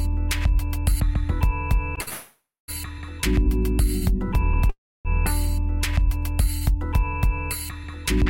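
From 2.01 to 2.09 s a packet arrived late and the jitter buffer ran dry, causing a short stall from a late packet. The last sound is held for 60 ms with a slight buzz or dip, then carries on with nothing missing.

From 2.09 to 2.70 s, and again from 4.70 to 5.07 s, comes a call audio freeze, likely from packets held up in transit. The held sound fades as a buzz or hiss into 220 ms and 280 ms of silence, then resumes where it stopped, nothing lost.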